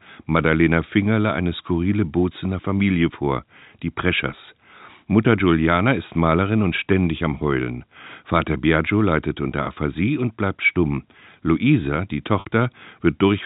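At 12.40 s, packet loss with pitch repetition fills a 60 ms gap, consistent with three 20 ms packets, by looping the last pitch period; unlike a hard dropout, it sounds like a brief buzzy hold rather than silence.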